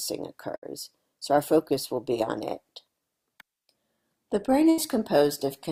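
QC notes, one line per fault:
0.55–0.65 s and 4.70–4.80 s, burst of packet loss: a short run of audio never arrived, so the receiver stretched out the last bit of sound for about 70–80 ms, fading it into a held buzz or hiss, then jumped ahead with roughly 60 ms gone. The second gap also shifts the timing by about 17 ms.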